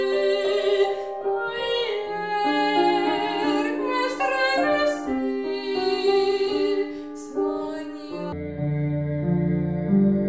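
From 8.32 s to the end at 10.28 s, the audio slows to half speed and drops a full octave: a wrong sample rate, which fits 32 kHz material played at 16 kHz.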